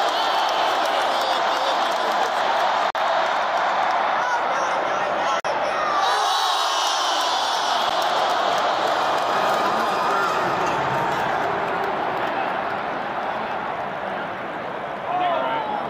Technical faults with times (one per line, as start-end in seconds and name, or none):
0.00-15.90 mains buzz
2.90-2.95 block of digital silence
5.40-5.45 block of digital silence
7.89 block of digital silence